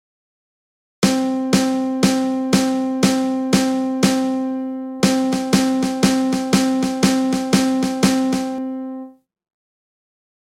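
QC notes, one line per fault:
5.00–8.58 s, doubled audio track: a second, slower capture path or an out-of-step edit has likely laid a duplicate of the signal under the original. The copy trails by roughly 0.3 s and sits about 10 dB down, full-band and dry, with no decay or room colour. That produces a distinct, flat slapback repeat rather than reverb, and it switches on abruptly at 5.00 s and cuts off just as abruptly at 8.58 s.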